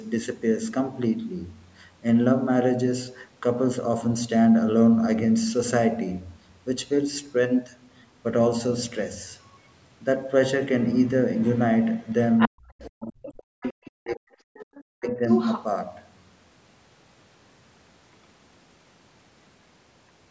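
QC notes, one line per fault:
12.38–15.63 s, other side's voice leaking through: a second voice surfaces in six scraps, at 12.38–12.49, 13.23–13.42, 13.62–13.88, 14.10–14.16, 14.54–14.82 and 15.29–15.63 s. The first and last are strong, only a little below the main talker. The middle four sit well down, roughly 20 to 25 dB under. The likely cause is a loudspeaker feeding the far end back into the microphone, with the echo canceller leaving residue it failed to subtract.
12.48–14.43 s and 14.82–15.25 s, speech suppressed in double talk: the main talker's level repeatedly collapses, by as much as about 40 dB at the deepest points. Roughly one and a half seconds are affected in the first span and under half a second in the second, so the talker breaks up while the far side is playing on the loudspeaker. This likely comes from the echo canceller, unable to tell near speech from echo during overlap, attenuating everything.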